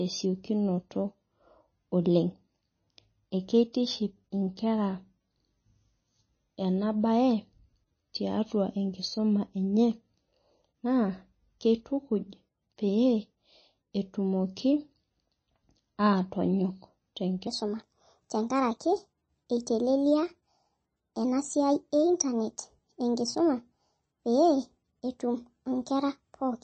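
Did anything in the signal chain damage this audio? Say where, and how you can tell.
Yes. Throughout, the audio is watery and swirly, likely from MP3 compression at a very low bitrate, which fits something around 23 kbps.

There's pre-echo at 3.73 s: a brief hiss just before a sharp attack, because the codec smeared its quantisation noise across the whole block.

From 17.47 s to the end, the section runs at the wrong speed: 1.27 times fast and about four semitones high, likely from playback or editing at a mismatched clock.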